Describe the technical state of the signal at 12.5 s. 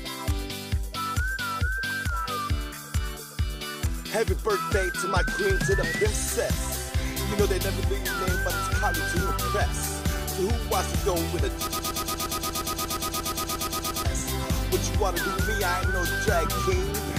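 At 12.5 s the signal is inside a broken-record loop running from 11.67 s to 14.05 s. The likely cause is a player, encoder or stream that stalled and kept resending the last fragment it held. The same 0.12 s (117.67 ms) slice of sound repeats exactly, back to back, 20 times, giving a rapid mechanical stutter at roughly eight repeats per second. Whatever should have played during those 2.4 seconds is gone.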